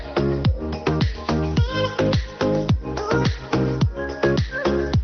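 Nothing stood out on listening, apart from the narrowed top end typical of an Opus call path, with the high frequencies cut off at about 6 kHz.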